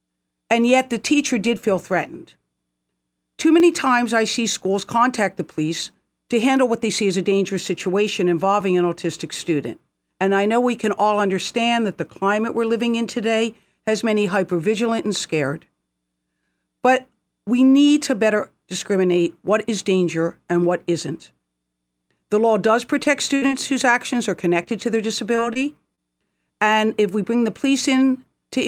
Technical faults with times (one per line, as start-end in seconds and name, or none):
3.60 overlapping chunks
8.61 overlapping chunks
23.03-23.08 short concealed packet loss
23.36-23.44 burst of packet loss
23.48-23.51 short concealed packet loss
23.62 overlapping chunks
24.63-24.67 short concealed packet loss
25.35-25.57 short concealed packet loss
25.95-25.99 short concealed packet loss
28.63 overlapping chunks